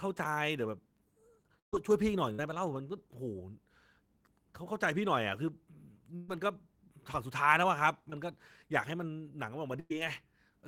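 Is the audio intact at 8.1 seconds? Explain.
No. At 8.10 to 8.14 s there is a short concealed packet loss: about 20 ms of the speech never arrived, and the receiver covered roughly 19 ms of it by extending the preceding sound and then crossfading back into the real signal. It comes across as a quick smear or wobble. On a spectrogram the harmonics or noise run unnaturally flat and static across that sliver, and the waveform shows a briefly repeated, overly regular stretch.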